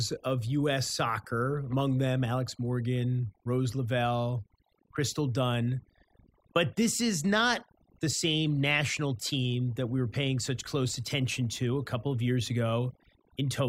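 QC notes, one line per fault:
Throughout, overdone noise removal: the noise reduction was pushed too hard, so individual frequency bands near the noise estimate are cut almost to nothing, taking quiet speech detail with them. Background drops and breaks up into twinkling specks; spectrogram shows scattered isolated dots between words and ragged, hollowed-out speech harmonics.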